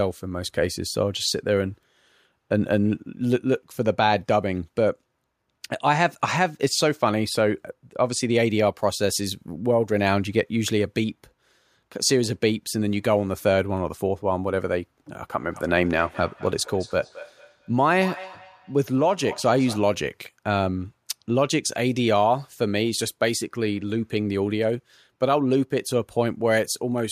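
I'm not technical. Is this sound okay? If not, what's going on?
No. From 15.3 to 20.0 seconds there's feedback echo between two devices: two devices on the same call are close together, so one picks up the other's playback and sends it back. Each word returns about a fifth of a second later, quieter than the speech.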